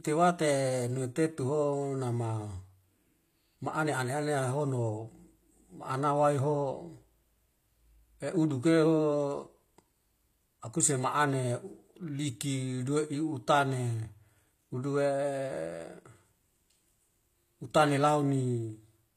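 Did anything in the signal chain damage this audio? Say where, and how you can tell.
Yes, at the codec stage. The damage is plainly audible for the whole clip, and the likely cause is HE-AAC compression at a low rate, which fits roughly 24 kbps. The encoder kept only the lower spectrum and rebuilt the treble by spectral band replication, copying lower bands upward under a coarse envelope. The rebuilt harmonics don't line up with the real ones, so the s sounds come out gritty, metallic or lispy, and nothing reaches above 14.9 kHz.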